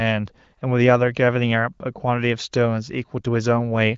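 No technical faults can be heard in this speech recording. It carries the character of the AMR wideband (HD Voice) codec, with nothing above about 7.6 kHz and, at most, faint traces of coding, which fits one of the codec's higher rates.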